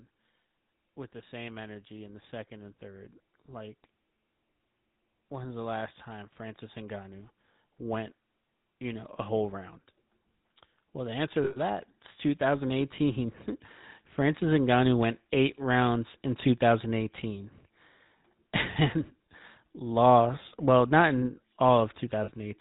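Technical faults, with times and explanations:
Throughout: GSM full-rate codec. The speech has a buzzy, gravelly roughness and nothing above 4 kHz, as the 13 kbps coder rebuilds the vocal tract from a sparse pulse excitation. The grain is steady across the clip, unlike the brief metallic rings where frames drop.
1.12–3.83 s, 5.29–9.6 s, 10.93–14.83 s: automatic gain rising. The gain control judged the input too quiet and raised it slowly, by about 4 dB, then about 6 dB twice; the last swell ends just before "went eight rounds in". Speech and background lift together over seconds, not abruptly.
11.44 s and 22.24 s: lost GSM frames. Bad frames were filled by repeating the last good frame, holding the sound as a rough metallic ring for 120 ms and then 40 ms. Unlike the constant codec buzz, it is a short frozen tone rather than a gap of silence.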